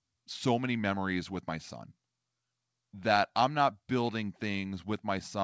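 No faults found in the speech; the call path is working as expected, with nothing above 8 kHz, which fits a wideband G.722 link at 64 kbps.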